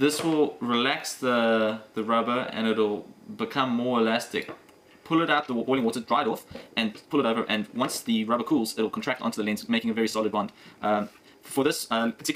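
At 5.32 s the pace of the audio jumps abruptly and stays fast to the end, running at about 1.86 times its earlier speed while the pitch holds where it was. This is a time-stretched section, likely produced by software squeezing that stretch of audio to fit a shorter length, discarding short fragments to keep pitch intact. The faster pace makes the sped-up material sound rushed.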